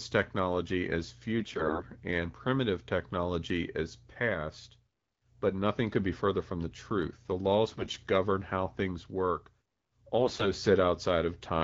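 Speech that turns hoarse, scratchy and gargly in three short bursts, from 1.39 to 1.87 s, 7.69 to 7.95 s and 10.21 to 10.49 s, while pitch and loudness stay roughly in place. These are AMR bit errors: flipped, lightly protected bits in the wideband voice codec's frames misplace the excitation pulses and skew pitch, gain and spectral detail. The first burst is the heaviest, with around one bit in seven corrupted.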